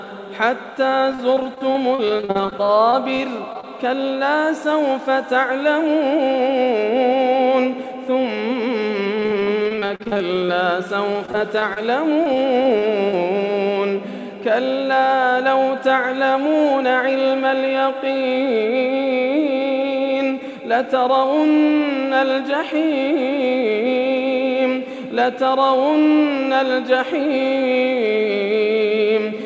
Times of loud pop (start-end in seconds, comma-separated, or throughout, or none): none